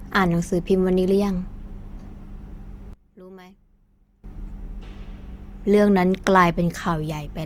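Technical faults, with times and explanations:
Throughout: Opus compression. The speech sounds rough and grainy, with plainly audible codec damage, though the band stays open to about 20 kHz. This points to a fullband CELT-mode encode at a rate near 24 kbps, which likely fills starved bands with folded or noisy content.
2.93–4.24 s: one channel inverted. The voice nearly vanishes, dropping by about 22 dB and leaving a faint residue. The likely cause is reversed polarity on one stereo channel, so the centred speech common to both cancels when they are summed to mono.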